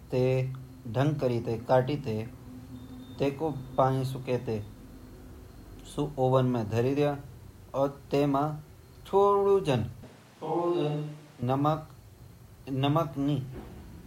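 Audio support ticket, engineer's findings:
10.03–11.42 s: speech abruptly turns roomy and hollow, thinner in the bass, about 5 dB quieter, room noise roughly 30 dB below the speech. Likely a switch to a distant microphone. A plain gain drop wouldn't add room sound, and the change back is equally sudden.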